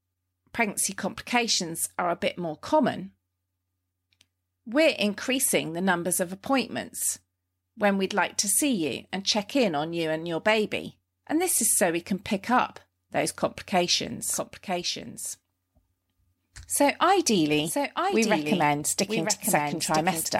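A doubled audio track begins at 14.33 s and runs to the end of the speech: a second full-band copy of the same audio sits about a second behind the original, roughly 5 dB quieter. It cuts in abruptly and carries no decay or room colour, so it sounds like a clean overlapping repeat rather than an echo. The likely cause is the signal being captured again through a slower path, or an edit leaving two copies out of step.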